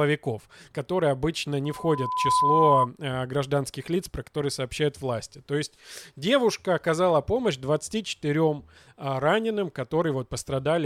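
Speech, and there's a loudspeaker feedback squeal from 1.64 to 2.88 s: a pure tone at 1 kHz swells up over a bit under a second until it sits a few dB above the voice, as the mic catches its own speaker and that frequency runs away.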